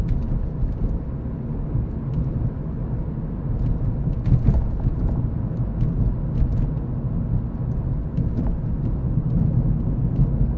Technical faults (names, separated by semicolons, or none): none